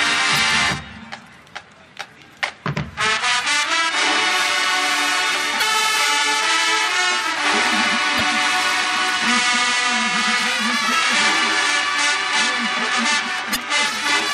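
Damaged data in a compressed stream strikes five times: at 0.36 to 0.39 s, 2.71 to 2.75 s, 5.58 to 5.62 s, 8.18 to 8.21 s and 13.52 to 13.57 s. Each time, corrupted bytes reach the decoder, which misreads the affected frames, loses sync and has to hunt for the next valid frame header. The result is a brief chirp or squawk, 20 to 45 ms long, cutting across the audio before clean decoding resumes.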